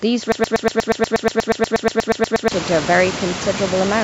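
From 0.32 to 2.52 s, a broken-record loop repeats one identical 120 ms fragment 18 times, likely from a stalled stream. Unlike echo, no new sound continues underneath.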